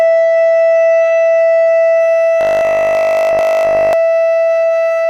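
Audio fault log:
0.0–2.0 s, adaptive stream starting at a low bitrate: the player opened on a low-rate version. The music's treble is missing or synthetic until quality jumps up without a gap.
2.41–3.93 s, robotic sound from repeated short buffers: audio likely arrived too seldom, so 20 ms chunks were looped. This forces a rigid, metallic 50 Hz buzz across essentially the whole stretch.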